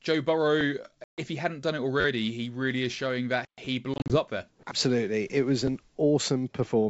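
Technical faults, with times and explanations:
1.04 to 1.21 s, packet loss on an ADPCM call: about 140 ms of the G.722 wideband sound drops to hard-edged silence, then returns slightly distorted. The decoder's predictor and step size lost track of the sender's during the gap and need tens of milliseconds to realign.
2.00 to 2.05 s, repeated buffer: a quick buzzing stutter, with one short slice of sound played five times back to back, each join hard. Fresh audio arrived late, so the device replayed its last block, roughly 10.7 ms long, which fits a 512-sample buffer.
3.94 to 4.19 s, packet loss on an ADPCM call: several short holes, together about 100 ms and none longer than 40 ms, break the sound over roughly 160 ms, each followed by slightly distorted speech while the ADPCM decoder's adaptive state catches up with the sender's.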